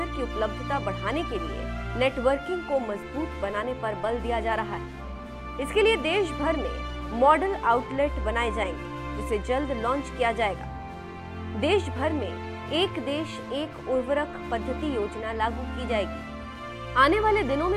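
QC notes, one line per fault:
No faults heard anywhere in the clip.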